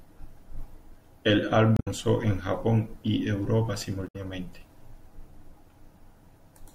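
Damaged data in a compressed stream corrupts two short stretches, from 1.74 to 1.88 s and from 4.05 to 4.16 s. The decoder misreads the broken frames and loses sync, so the speech gives way to a brief glitch each time.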